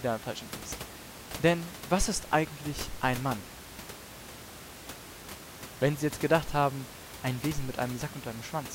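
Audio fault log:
No faults detected.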